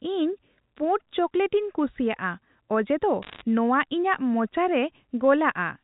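From 3.22 to 3.42 s there's a short burst of bit errors on a digital phone line. Around one bit in a hundred gets flipped in the G.711 stream, so scattered samples jump, and you hear sharp ticks and crackle riding over the speech for that fifth of a second.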